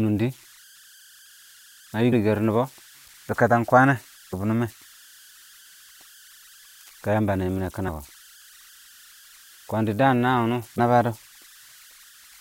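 Throughout the speech, converter idle tones sit under the signal: a faint whistle around 1.5 kHz, about 29 dB below the speech, with grainy noise beneath the quieter passages. An undithered delta-sigma converter given very small input falls into repeating bit patterns, and those patterns produce this steady tone. On a spectrogram it appears as a thin horizontal line near 1.5 kHz that persists through the pauses.

At 2.12 s compressed frames are skipped. Roughly 150 ms of speech is missing, which fits about seven frames of 23.2 ms that were lost or rejected by the decoder. The speech jumps forward. At 4.32 s, just after "kwən nɛ", a larger skip removes about 400 ms, consistent with around fifteen frames. On the waveform, each join shows a sudden change in the envelope, and on the spectrogram the harmonics break off abruptly and resume.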